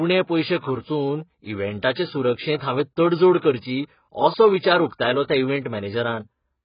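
From start to finish the speech is dull and smeared, with nothing above 5 kHz and a warbling, fizzy texture on sibilants and held sounds. This is likely heavy AAC compression, consistent with AAC-LC at roughly 12 kbps, where too few bits force a low cut-off and coarsely quantised, patchy spectrum.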